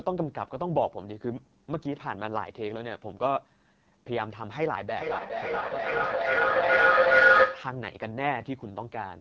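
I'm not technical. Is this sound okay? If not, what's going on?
No. Throughout, the voice sounds rough and raspy from the AMR wideband (HD Voice) codec at a low setting; the roughness is part of the voice itself, not a separate background hiss. From 4.96 to 7.83 s there is a feedback howl: a whistle near 1.5 kHz that grows louder instead of fading like an echo would, with the sound going round the loop about every 0.4 seconds.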